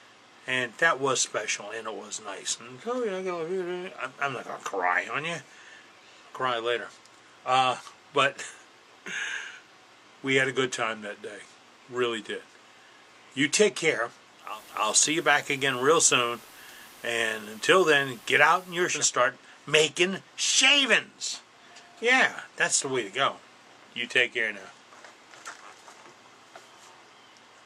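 At 14.38 s a steady hiss fades up over about 242 ms and the level shifts by about 2 dB, with the hiss sitting some 25 dB below the programme. At 19.05 s the sound cross-fades back and the hiss clears. This is digital radio blending to analogue: the hybrid receiver lost its digital signal and switched to the station's FM broadcast, then returned to digital once reception recovered.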